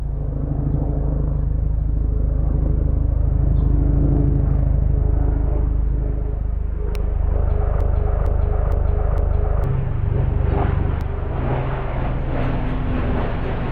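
Electrical switching spikes at 6.95 s and 11.01 s cut into this everyday-sound recording as sharp, isolated snaps laid over the audio. They are likely arcs from a nearby switch, motor or static discharge that the audio line picked up. A broken-record loop runs from 7.81 s to 9.64 s, where a fragment of about 0.46 s plays four times back to back, replacing whatever should have been heard there. This is likely a stalled player, encoder or stream resending the last piece it held.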